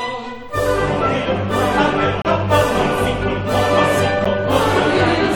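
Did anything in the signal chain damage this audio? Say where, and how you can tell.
Yes, at playback. There is a gap between stream segments. Hard-edged silence cuts from 2.22 to 2.25 s, and at 4.25 s. The holes sit two seconds apart, at segment boundaries. Timestamps left space, and the player filled it with silence. No audio is lost.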